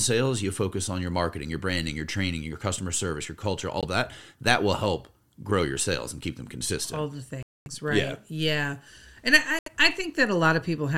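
Speech with three brief dropouts to silence. The audio gaps for about 17 ms near 3.81–3.85 s, 235 ms at 7.43–7.68 s and 75 ms at 9.59–9.68 s, then resumes. These are likely Bluetooth stalls, where delayed packets let the headphone buffer run empty.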